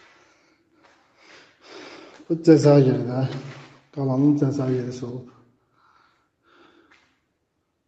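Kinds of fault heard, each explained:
Nothing stood out on listening; the top end stops at about 8 kHz, as expected for audio carried over a call.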